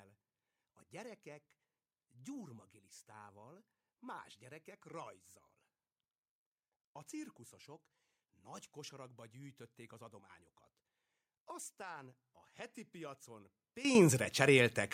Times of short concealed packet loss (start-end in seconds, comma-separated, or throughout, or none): none